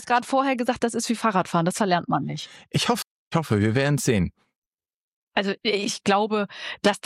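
Between 1.40 and 3.97 s the audio goes duller and picks up a gritty, grainy noise floor, then snaps back to its earlier clarity. That's a Bluetooth SBC bit pool drop: the link got congested, so the encoder cut its bit budget, the top sub-bands were starved of bits and lost their treble, and the rest were quantised coarsely. The degree of dulling fits the bit pool falling from 28 to 13, around 102 kbps.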